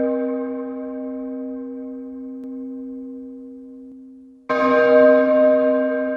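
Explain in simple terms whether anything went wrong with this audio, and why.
From 2.44 to 3.92 s there is a doubled audio track: a slightly quieter copy of the sound trails about 0.4 s behind and cuts in and out abruptly, likely from a second, slower capture path.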